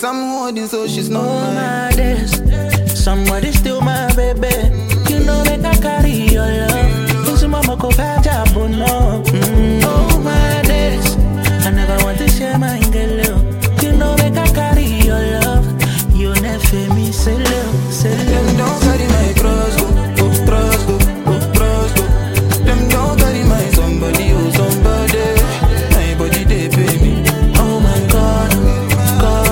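Sample clock jitter runs through the whole clip. The converter's sampling clock wanders by something like 5 microseconds, so each sample lands slightly early or late at random. The resulting error scales with how steeply the waveform is moving, and here it sits roughly 25 dB below the signal. It comes through as a grainy hiss riding on the audio, growing rougher on loud and bright passages and disappearing whenever the sound falls silent.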